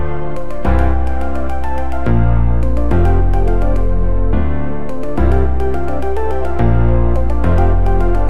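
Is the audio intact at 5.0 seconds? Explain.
No. At 5.0 seconds the signal carries a DC offset, as it does for the entire clip. The whole waveform sits displaced from zero by a fixed amount, about -14 dBFS, so every sample is pushed in the same direction. You can't hear this directly, but it eats into headroom, bringing one polarity closer to clipping, and it appears as constant energy at 0 Hz at the very bottom of the spectrum.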